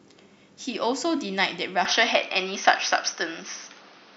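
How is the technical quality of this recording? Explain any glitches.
At 1.85 s the speech abruptly turns duller and boxier, with nothing above about 6.3 kHz from there to the end. The level shifts by around 5 dB and a new background noise appears roughly 30 dB below the speech. The change happens with no gap of silence. This points to a likely input switched to a poorer device: the recording jumped mid-stream to a lower-grade microphone or headset path with a narrower band, its own gain and its own self-noise.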